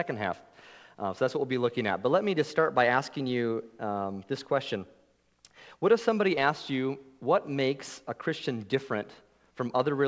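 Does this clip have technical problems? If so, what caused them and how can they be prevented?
No, this clip has no technical problems, so there is nothing to prevent.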